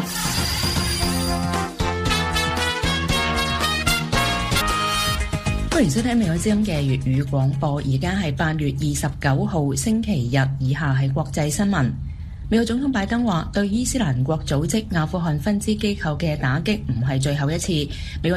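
At 4.60 to 4.62 s the sound jumps abruptly forward, with a brief blip at the join. This is likely a stream segment skipped: one piece of the segmented stream failed to load, so the player dropped it and resumed with the next.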